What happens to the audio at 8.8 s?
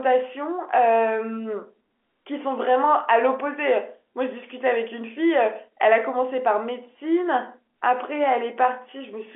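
Nothing goes wrong at 8.8 s: the speech carries on intact through that moment, heard through the narrow telephone band of G.711 coding with no dropout, click or distortion.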